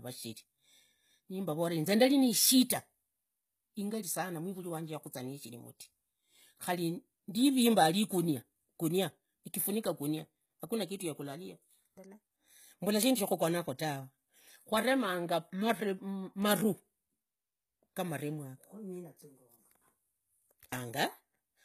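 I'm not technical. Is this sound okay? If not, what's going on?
No. The speech sounds coarse throughout, with gritty, lispy s sounds. This is likely HE-AAC compression, which rebuilds the treble from copied lower sound.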